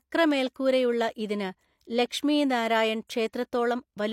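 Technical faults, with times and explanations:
0.54 s pre-echo: a brief hiss smears in about 16 ms ahead of a sharp speech onset, as block-wide codec quantisation noise fills the quiet before the attack.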